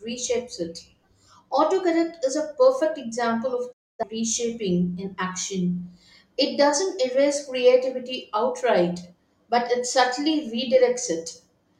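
Digital broadcast dropout, 3.71 to 4.04 s, after "a perfect example of": failed frames made the receiver mute, fading out in 20 ms, until "reshaping in action".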